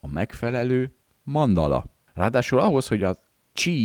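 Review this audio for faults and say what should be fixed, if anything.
Between 0.43 and 0.61 s the speech turns rougher and noisier, but it never drops out. This is a lost packet rebuilt from error correction. Packets went missing in transit. Each following packet carried a low-bitrate backup copy, and the decoder played those copies instead. About 100 ms of audio was rebuilt this way, which points to roughly five separate lost packets. To prevent it, fix the network loss, for example with a more stable connection or less congestion.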